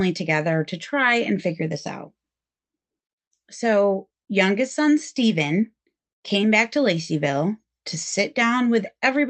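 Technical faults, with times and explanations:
6.41–6.44 s, short concealed packet loss: About 20 ms of the call audio failed to reach the decoder in time, and the receiver's concealment covered the gap by extending the preceding sound, continuing its pitch if voiced or substituting shaped noise if not, before crossfading back into the real signal. The result is a brief smear or wobble. The surrounding audio shows the call codec's band limit near 8 kHz, consistent with Opus at a moderate bitrate.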